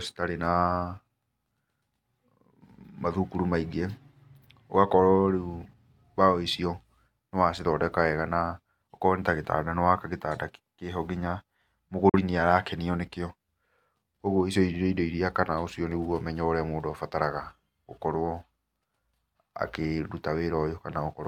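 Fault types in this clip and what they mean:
Digital broadcast dropout: the receiver muted on undecodable data. Speech cuts to silence at 12.09 s and returns by 12.19 s. The gap fits one lost frame.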